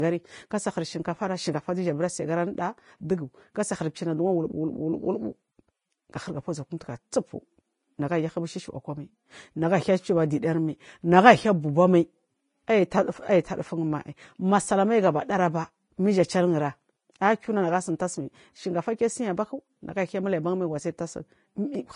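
Vorbis compression is the likely cause of damage audible throughout the speech. Nothing remains above 10.5 kHz, and the treble riding on the smooth spectral floor is quantised so coarsely that detail turns into grainy hiss, roughening vowels and blurring consonant onsets. This fits a bitrate of around 30 kbps.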